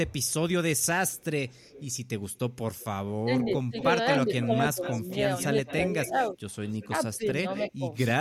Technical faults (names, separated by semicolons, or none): echo leak; speech suppressed in double talk